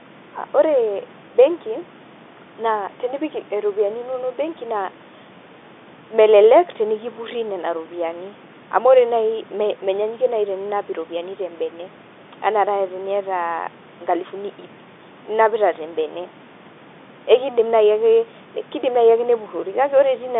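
Nothing goes wrong anywhere in this speech clip; it has the narrow, slightly boxy sound of an ordinary phone line, passing roughly 150 Hz to 3.6 kHz as telephone coding does, with a low background noise from the room sitting about 27 dB under the voice.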